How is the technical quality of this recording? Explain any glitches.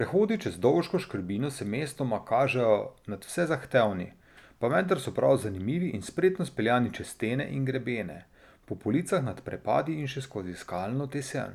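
No glitches or faults are audible.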